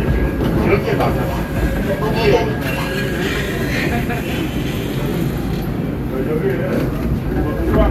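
At 3.25 to 3.27 s a corrupt frame is decoded in this recording of everyday sounds. For roughly 24 ms, about the span of a single compressed frame, flipped bits in the stored data caused the decoder to misread gains and spectral codes. It reconstructed the frame regardless, putting energy at frequencies that do not belong to the surrounding sound. The result is a short, sharp blip of foreign noise, peaking around -15 dBFS.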